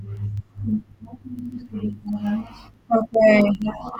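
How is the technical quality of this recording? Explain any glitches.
The recording has a clocking problem. From about 0.10 s to 3.96 s there's a steady run of word clock ticks, roughly one every 70 ms, so around fifty across the speech. The receiving device is reading a digital link on its own clock rather than following the sender's, and each time the two drift a sample apart, one sample is dropped or repeated. That rate suggests the clocks disagree by a few hundred parts per million. You hear it as a sharp, regular ticking over the voice.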